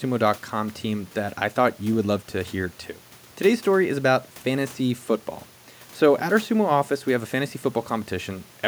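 No technical faults can be heard anywhere in the recording.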